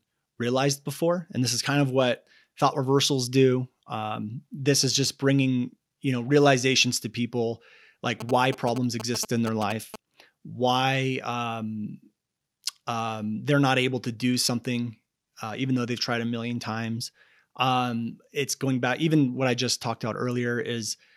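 From 8.20 to 9.96 s, GSM signalling bursts intrude: galloping ticks and 217 Hz buzzes, rectified from a nearby phone's radio pulses, sitting roughly 10 dB below the sound.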